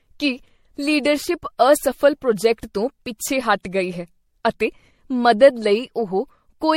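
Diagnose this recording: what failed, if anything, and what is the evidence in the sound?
Generation loss, throughout the speech, at the codec stage. The sound is swirly, smeared and hollow, with blurred attacks and nothing above 16.5 kHz. This points to MP3 near 64 kbit/s, likely re-encoded about seven times, each pass requantising on a shifted frame grid.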